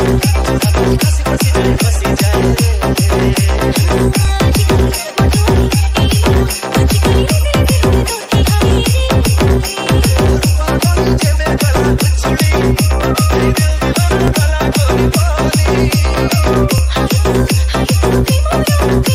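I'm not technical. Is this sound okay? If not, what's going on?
No. There are small clicks or stutters at 4.25, 11.77, 14.28 and 16.78 seconds. These come from overlapping chunks. The sound was handled in 2.5-second pieces, and each piece began slightly early. So about 6.5 milliseconds replays at each join.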